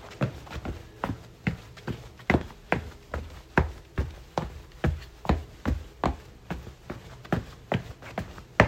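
A sudden voltage step or pulse, likely from a plug, switch, static discharge or driver glitch, gets added to the signal path at 2.41 s. The circuits downstream shape it into a brief burst lasting until about 2.44 s. The result is a single loud pop, peaking roughly 10 dB above the surrounding sound. That sound keeps running underneath, so the pop sits on top of it as a sharp, isolated thump.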